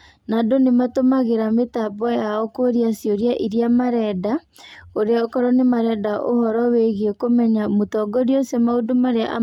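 Nothing goes wrong anywhere in this recording; there's no technical fault to point to at any moment.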